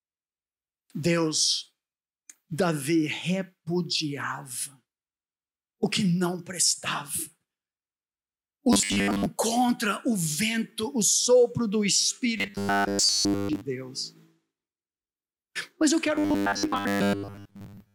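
Robotic sound from repeated short buffers, likely caused by new audio arriving too seldom so the playback fills each gap by repeating its last 10 ms chunk. Most of the real audio in these stretches is skipped. The repetition imposes a fixed 100 Hz pitch, turning the sound into a rigid, metallic buzz that only loosely tracks the original. It occurs from 8.73 to 9.26 s, from 12.38 to 13.61 s, and from 16.15 s through the end at 17.94 s.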